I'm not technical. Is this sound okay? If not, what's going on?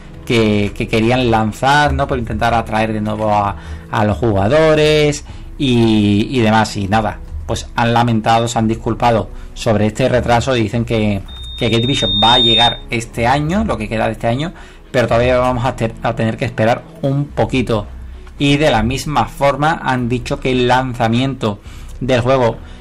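No. From 11.28 to 12.86 s there's loudspeaker feedback squeal: a mic catches its own speaker, and a 3.7 kHz whistle builds up over about a second.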